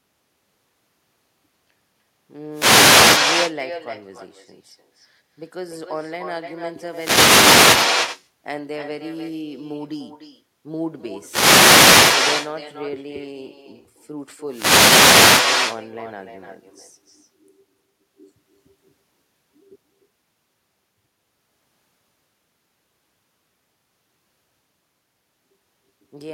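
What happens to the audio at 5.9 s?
At 5.9 s the speech carries echo with no canceller, present throughout the whole clip rather than starting there. A loudspeaker at the far end feeds the microphone, and nothing subtracts that leak, so each phrase returns about a third of a second later at roughly 6 dB below the original, and thinner. On a waveform every burst trails a smaller copy. A spectrogram shows each syllable's pattern repeated, somewhat weaker, just behind it.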